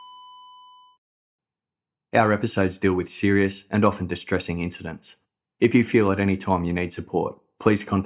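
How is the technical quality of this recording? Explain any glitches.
No technical faults are audible.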